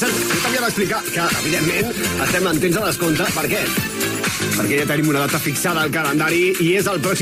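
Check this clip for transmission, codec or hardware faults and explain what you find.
Two faults are audible.

From 0.71 to 3.73 s there is a call bitrate drop. The bandwidth estimate fell, and the encoder was pushed to far fewer bits, which fits a fall from about 96 to 17 kbps that holds its low for roughly 3 s. The coarser coding strips the top end, so the sound turns muffled and rough until it recovers.

From 4.26 to 5.49 s a drift correction step is the likely cause. Clock-matching software appears to have changed the playback rate in one jump, and the audio runs about 6% slow and drops 108 cents, a little over a semitone. It sounds suddenly detuned and sluggish, then snaps back.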